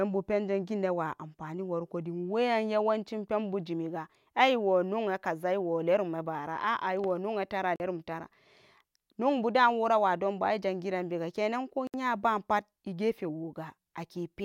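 At 7.76 s and 11.87 s the speech drops to silence for about 41 ms and 66 ms, then resumes: a Bluetooth stall, likely from interference delaying packets until the headphone buffer emptied.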